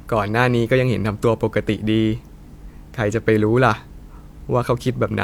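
Listening to the speech in this clip, nothing stood out as a technical problem.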